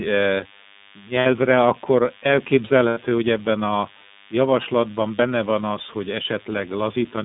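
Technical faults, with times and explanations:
throughout, DECT cordless phone buzz: A thin, steady buzz at 100 Hz sits roughly 25 dB below the speech. A nearby DECT transmitter bursts every 10 ms and the audio circuit rectifies it. A spectrogram shows an evenly spaced comb of harmonics at 100 Hz intervals running the whole clip, even in pauses.
throughout, iLBC codec: Speech is narrowband and slightly rough and synthetic, with nothing below about 150 Hz or above 3.7 kHz. This fits iLBC's 30 ms, 13.33 kbps mode, where each frame's excitation is coded independently. A spectrogram shows a hard ceiling near 3.7 kHz and coarse, smeared harmonic detail.
1.19–1.26 s, 2.88–2.98 s, 5.16–5.20 s, lost iLBC frames: Brief held, buzzy vowel sounds replace the speech. The second comes just before "hogy ebben a javaslatban", and the third falls between "hogy ebben a javaslatban" and "van az hogy". The decoder repeated the last pitch cycle mixed with noise for gaps of about 60, 90 and 30 ms. 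On the waveform these look like short runs of repeated periodic cycles, and on the spectrogram like frozen harmonics. Normal speech returns almost immediately after each gap.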